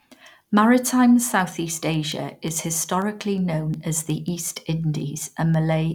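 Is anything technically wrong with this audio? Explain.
Yes. From 0.14 s to 5.91 s the speech carries a steady train of sharp, uneven ticks, about five per second and around thirty in all. These are word clock ticks: the receiving device seems to run on its own clock rather than lock to the digital source, so the two drift apart and at each slip a single sample is dropped or repeated. A slip roughly every fifth of a second points to a clock mismatch on the order of 150 ppm.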